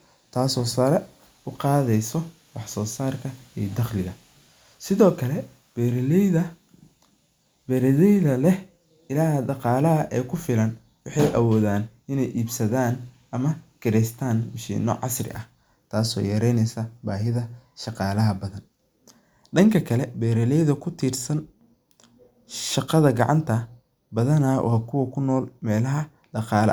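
Speech recording with no audible technical faults present.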